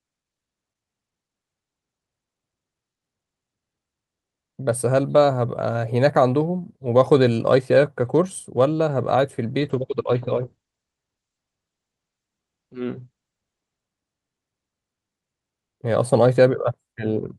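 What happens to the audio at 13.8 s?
At 13.8 s you're at the tail end of a call bitrate drop that runs from 9.61 to 13.85 s. The encoder's rate collapses from 48 to 12 kbps and its bandwidth from 20 kHz to 8 kHz, so the speech sounds coarse and muffled until it recovers.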